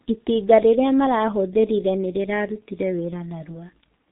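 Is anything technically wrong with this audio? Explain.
Yes. The speech carries G.723.1 codec damage throughout, and it is heavy. Nothing reaches above about 3.8 kHz, so it sounds muffled. The codec's coarse 30 ms frames and slowly updated voice model, which fits a rate near 6.3 kbit/s, leave it hoarse with smeared consonants.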